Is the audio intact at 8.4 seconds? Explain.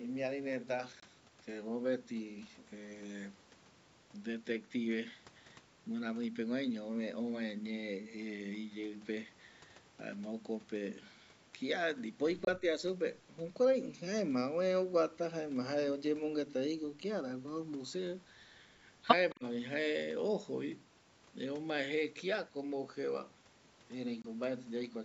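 Yes, the speech at 8.4 seconds is intact, having passed through ordinary call microphone processing that trims the lowest bass and carries nothing above 8 kHz.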